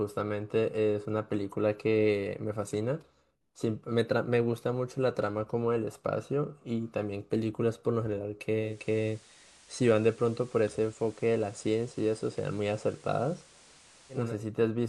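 At 8.59 s the speech does a digital radio blend to analogue, cross-fading over about 269 ms to the FM feed when the digital signal drops. Hiss sits around 30 dB down, and level holds until it blends back at 14.36 s.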